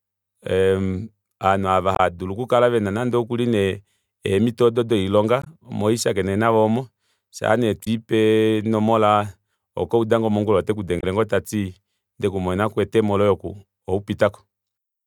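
Damaged data in a compressed stream affects this speech clip four times, at 1.92 to 2.00 s, 5.42 to 5.47 s, 7.83 to 7.88 s and 10.99 to 11.04 s, each a brief chirp or blip. Corrupted bytes make the decoder misread those frames and lose sync until it finds the next valid frame header.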